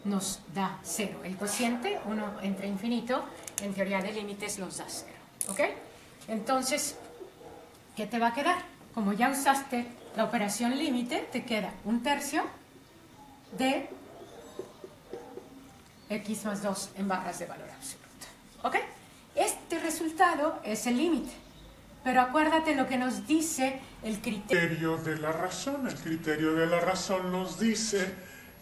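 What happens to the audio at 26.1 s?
A wrong sample rate from 24.53 s to the end plays the samples at about 0.73 times their original rate, which fits 44.1 kHz audio played at 32 kHz. The sound slows and drops about 5.6 semitones.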